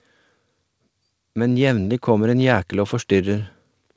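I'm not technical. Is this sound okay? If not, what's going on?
No. From about 1.34 to 3.54 seconds the speech slowly gets louder. This is automatic gain rising: the call's volume control decided the input was too quiet and turned it up gradually. Unlike someone simply speaking louder, the background noise swells along with the speech.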